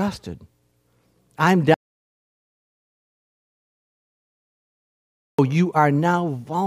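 At 1.74 s the speech cuts off abruptly and the track falls into dead silence, with no room tone or background hiss underneath, until the voice resumes mid-flow at 5.39 s. About 3.6 s of speech is simply missing. This is an audio dropout to silence: the input signal was likely lost, through a disconnected device, a failed link or an accidental mute, while the recorder kept writing silence in its place.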